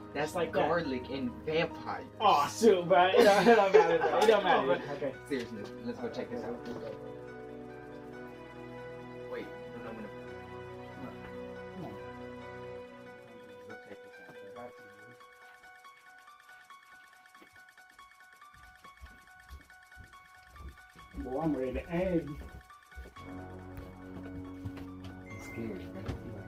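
No technical faults can be heard anywhere in this audio.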